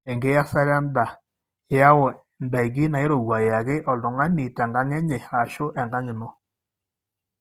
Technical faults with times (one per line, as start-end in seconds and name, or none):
0.00-7.41 Opus compression